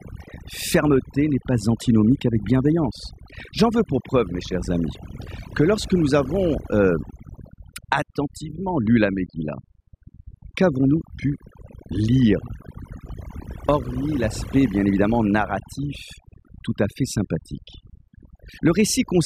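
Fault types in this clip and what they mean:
Overdone noise removal: a noise reduction stage was set too aggressively on a noisy speech recording, so any frequency band sitting close to its noise estimate gets pulled right down or switched off, and the softer parts of the voice are cut along with the noise. Across the whole clip the background drops and breaks up into twinkling, chirpy specks, while the speech has its quieter detail eaten away.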